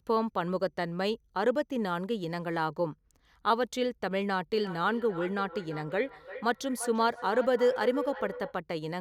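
From 4.53 s to 8.6 s there's feedback echo between two devices. The speech keeps coming back roughly every third of a second, peaking about 10 dB below the direct voice. One device is replaying the other's mic, and that mic picks it up again.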